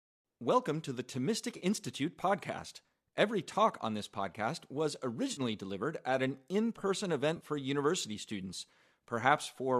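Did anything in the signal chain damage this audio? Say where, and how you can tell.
Yes, the damage happens at the network stage, as AAC frame loss with concealment. Three brief smeared, phasey patches interrupt the speech: at 1.57 to 1.64 s (40 ms), at 5.32 to 5.41 s (50 ms) between "on this podcast was" and "delivered at an in", and at 7.37 to 7.44 s (40 ms) between "at an in person" and "for university students". Frames were dropped, and the decoder patched each gap from the last good spectrum. The gaps fit four or five lost frames of about 10 ms, as in a low-delay AAC stream, likely AAC-ELD.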